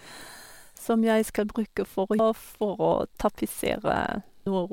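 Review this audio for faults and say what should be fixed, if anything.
Damaged data in a compressed stream at 2.19 s and 4.46 s: corrupted bytes make the decoder misread frames and resync, leaving two brief blips in the speech. Prevent it by checksumming files during transfer and storage, then re-fetching or re-encoding from an intact source.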